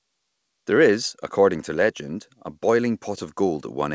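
Speech, with no technical faults to be heard.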